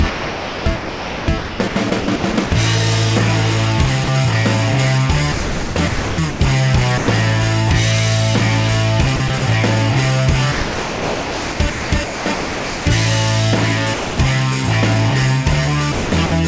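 The sound is chopped from 0.1 to 2.52 s, dropped from 4.04 to 4.08 s, chopped from 5.32 to 6.4 s, dropped from 6.98 to 7.08 s, chopped from 9.16 to 9.42 s and from 10.52 to 12.86 s, dropped from 13.94 to 14.18 s, and chopped again from 15.92 to 16.32 s.

Sound chopped by the voice detector: the detector is likely switching repeatedly within each stretch. The audio cuts in and out, with the missing parts replaced by comfort noise.

Sound dropped by the voice detector: the detector likely mistook the audio for background once. A single gap of steady comfort noise follows, lasting 40 ms, 100 ms or 240 ms, and then the sound resumes.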